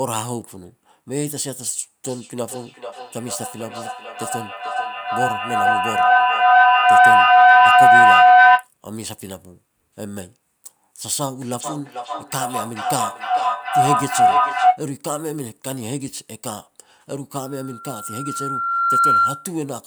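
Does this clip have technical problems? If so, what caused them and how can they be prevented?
Yes. Feedback howl appears from 2.04 to 8.7 s and again from 11.61 to 14.85 s. A room loop between two devices on the same call gains level each pass, narrowing to a tone near 700 Hz that pulses roughly every 400 ms. It peaks about 13 dB above the speech, then about 9 dB. Mute one device or use headphones when sharing a room.

A loudspeaker feedback squeal runs from 17.41 to 19.51 s. The microphone hears its own loudspeaker, and loop gain above one at 1.4 kHz lets that single tone swell over about one and a half seconds to roughly 10 dB above the signal. Lower speaker gain or move the microphone away.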